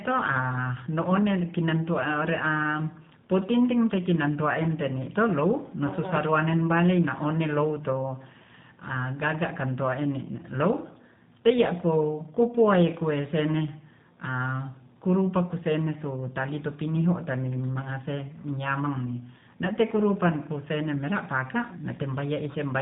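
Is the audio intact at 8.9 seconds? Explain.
No, not really. At 8.9 seconds the speech is going through G.729 coding, and that holds for the whole clip, not just this moment. The codec rebuilds each short frame from a vocal tract filter, a pitch predictor and a handful of pulses, so the speech stays intelligible but sounds plainly rough and a bit synthetic. Nothing above about 3.8 kHz survives, and the overall character fits an 8 kbit/s stream.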